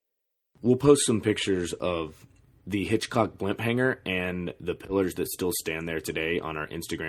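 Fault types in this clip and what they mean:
Nothing to flag here; the speech comes across without any technical problems worth pointing out.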